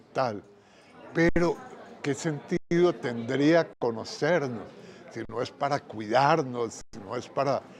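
At 1.29, 2.57, 3.73, 5.25 and 6.81 s the sound freezes for 71, 141, 80, 40 and 120 ms: an underrun with held sample. The output buffer ran dry and the converter held its last value, so the waveform flatlines. Playback then resumes where it stopped, ending each dropout softly.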